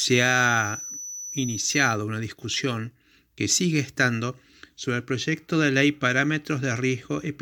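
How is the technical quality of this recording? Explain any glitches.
The recording has one audible fault, at the very start. From 0 to 2.0 s, ending just before "una discusión que sigue", a feedback whistle sits at 6 kHz, roughly 10 dB beneath the speech. The likely cause is a loudspeaker-to-microphone loop held just short of runaway. It sounds like a thin, slightly wavering tone and shows as a bright horizontal line on a spectrogram.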